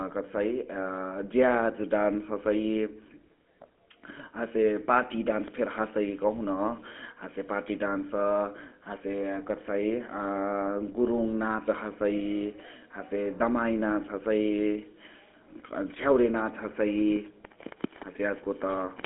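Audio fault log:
Throughout, GSM full-rate codec: the speech has that gravelly, buzzy edge you get when a vocal-tract model is driven by a sparse pulse train, fitting a 13 kbps full-rate link. It's squeezed into a 250 Hz to 3.4 kHz line band, with nothing above 3.8 kHz.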